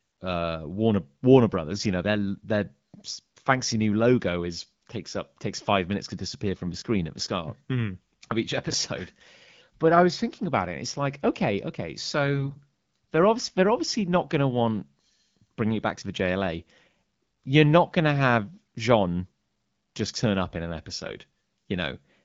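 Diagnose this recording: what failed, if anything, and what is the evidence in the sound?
The fault sits at the radio link feeding the AMR-WB decoder: AMR bit errors. At 6.66 to 6.74 s, between "five minutes to disappear" and "screen at the start", and again at 12.34 to 12.59 s, after "like okay okay", the speech turns hoarse and gargly while pitch and loudness hold. Flipped low-priority bits misplace excitation pulses and skew gain and spectral values. Packet loss would instead give a gap or concealment fade, not roughness over steady levels.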